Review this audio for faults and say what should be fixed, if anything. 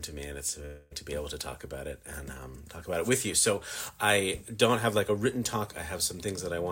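From 0.65 to 0.93 s the sound turns into a fading buzzy continuation of what came before, then resumes with about a quarter of a second of material missing, most likely a long network dropout. Unlike a brief packet loss, the concealment is stretched long enough to be heard. Unlike a plain mute, there is no silence, and playback skips ahead rather than stalling and resuming late. A larger jitter buffer, with redundancy or forward error correction on the network link, would prevent this.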